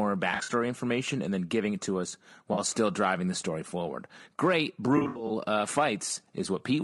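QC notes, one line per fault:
throughout: low-delay AAC compression. The speech sounds rough and grainy, with noise filling the gaps between harmonics. This is likely AAC-ELD's short frames resolving pitch poorly at around 32 kbps. A spectrogram shows smeared harmonic lines, hiss between them, and a thin, patchy top band.
0.31–0.49 s, 2.53–2.59 s, 4.97–5.31 s: AAC frame loss with concealment. The decoder patches missing audio from the last good spectrum, giving smeared, noisy, phasey spots. The first, before "information and then giving", loses about 100 ms, and the last about 180 ms, with runs up to roughly 70 ms. Spectrograms show blurred, flattened blocks, and waveforms show dips or altered envelopes.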